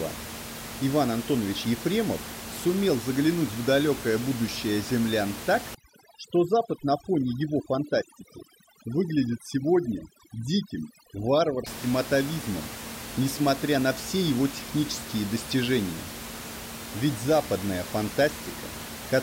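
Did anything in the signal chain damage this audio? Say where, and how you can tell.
Yes, overdone noise removal in call processing damaged it from 5.75 to 11.66 s, between "далекое будущее землян так" and "атовизмом несмотря на все". Over-aggressive band gating leaves near-silent gaps with twinkling specks. A spectrogram shows scattered isolated blobs and holes between harmonics.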